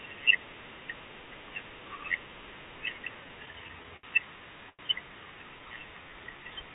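From 3.24 to 4.05 s the speech has repeated stalls, a stutter. Packets arrived late or more slowly than they were played, and the jitter buffer kept running dry. The receiver bridged seven gaps by continuing the last sound, about 132 ms in total and roughly a sixth of that stretch. The longest hold, 68 ms, fades down before the speech resumes. Nothing is lost, but the passage drags and hiccups in uneven jolts.

At about 4.69 to 4.81 s there is a short stall from a late packet. The next packet was not there when it was due, so the receiver stretched the preceding sound for 94 ms and then continued from the same point. Every later sound shifts 94 ms later. It is heard as one sound held unnaturally long, with a slight buzz or dip, followed by a normal restart.

From 5.55 to 6.43 s a jitter buffer slow-down sets in. With its reserve low or its target delay just raised, the receiver repeated single pitch periods and small pieces of pauses over and over, adding 99 ms and playing this stretch at about 89% speed. 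Pitch is unchanged, but the speech sounds drawn out, with at times a slight warble. Throughout, the call-path coding leaves nothing above 4 kHz, which fits G.711 mu-law at 64 kbps.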